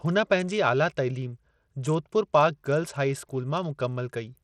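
From start to finish the speech carries plainly audible Bluetooth SBC compression, likely from a starved bit pool. The treble flickers in and out under gritty noise and aliasing, unlike the steady roll-off of a plain low-pass, and the grain fits roughly an 80 kbps stream.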